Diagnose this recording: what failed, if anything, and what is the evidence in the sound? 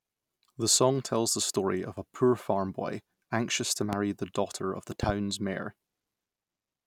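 A loud pop occurs twice, likely from a voltage transient in the analogue wiring, such as a connector, switch or static discharge. A single pop lands at 3.93 to 3.96 s, peaking around 15 dB above the speech. A double pop follows at 5.03 to 5.12 s, about 10 dB above it. Speech continues beneath both. The waveform shows sharp spikes towering over the speech envelope, and the spectrogram shows thin broadband vertical stripes, one at 3.93 s and a pair near 5.1 s.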